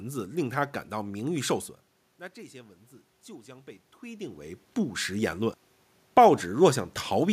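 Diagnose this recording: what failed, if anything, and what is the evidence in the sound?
Automatic gain rising in call processing: from 2.34 to 5.44 s, voice and room noise swell together by about 5 dB as the AGC chases a quieter input.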